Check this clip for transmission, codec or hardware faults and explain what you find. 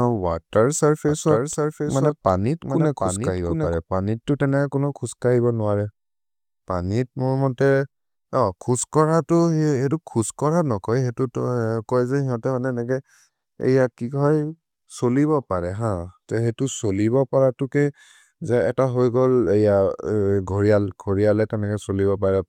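Two faults are audible.

From 1.08 to 3.74 s there is a doubled audio track: a dry, full-band copy about 5 dB quieter trails by roughly 0.7 s, likely from a second, slower capture path. On a spectrogram the speech pattern repeats, shifted right.

At 13.61 s an overlap between stream segments drops about 18 ms of speech, heard as a tiny skip. The waveform shows a sudden discontinuity.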